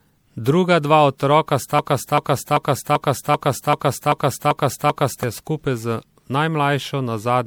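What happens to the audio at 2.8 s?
A broken-record loop runs from 1.79 s to 5.23 s, so at 2.8 s the same 0.39 s fragment is repeating exactly, back to back, nine times in all. The audio that should have filled that span is simply gone, most likely because the player or stream stalled and kept re-sending its last buffered piece.

Generation loss also affects 2.8 s, as it does the whole clip. The speech sounds swirly, smeared and hollow, with blurred attacks, beyond what a single encode would produce. That points to repeated MP3 re-encoding, likely several passes at around 96 kbit/s, each pass adding fresh quantisation noise and spectral holes.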